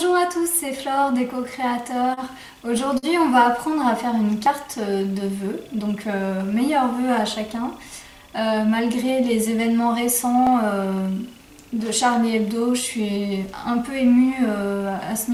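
From 1.81 to 2.20 s the audio stutters. These are repeated stalls. Packets reached the receiver late, so its jitter buffer ran dry four separate times. Each time, the receiver held the last sound going until the next packet arrived. The longest hold is 31 ms, and the four add up to 51 ms. That is about 13% of the stretch. Nothing is lost. The sound drags and catches instead.

From 2.98 to 3.06 s there is a short stall from a late packet. One packet came about 50 ms behind schedule. The buffer emptied, and the receiver stretched the last sound for 50 ms to cover the wait. Then it resumed from the same point. Nothing is missing here either. A sound is simply held too long, with a faint buzz or dip in it.

At 4.46 s and again at 10.47 s there is a sudden jump forward. No silence comes between the two sides. The audio just skips. The first skip loses roughly 40 ms and the second about half that. 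The likely cause is a dropped buffer (overrun). The program failed to collect its samples in time, and the hardware wrote over them. The pieces on either side were then joined directly.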